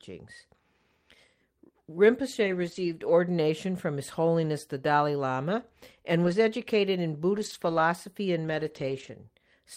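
Lost packets rebuilt from error correction affect this speech clip at 2.43–3.09 s, 4.45 s, 6.23–6.33 s just before "educated in", 7.29–7.79 s just after "educated in", and 8.43–9.09 s. In each stretch the audio turns rougher and noisier but never drops out: the decoder filled the missing packets with low-bitrate copies carried in the packets that followed. The longest repairs cover about 340 ms, which fits runs of many lost packets.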